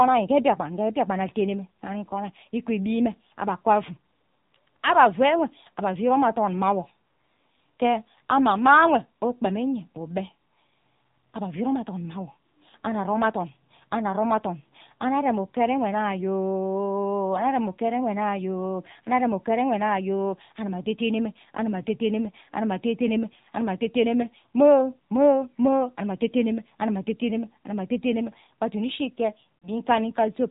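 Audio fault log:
throughout: AMR narrowband mobile codec. The speech sounds boxed-in and telephone-like, with no brightness at all above 4 kHz, and it carries a plainly audible buzzy, synthetic edge on the voiced sounds. The codec samples at 8 kHz and rebuilds speech from a vocal tract model excited by a handful of pulses per short subframe. The coarseness of that excitation suggests a low-rate AMR-NB mode, which fits 7.4 kbps.
29.58 to 29.69 s: lost AMR speech frames. Near the very end the speech briefly smears into a held, warbling tone that sags in level for about a tenth of a second, then the voice resumes a little rough and weak. The gap of about 40 ms fits two consecutive 20 ms frames that failed their checksum. The decoder bridged them by repeating the last good pitch and vocal tract settings at a falling gain.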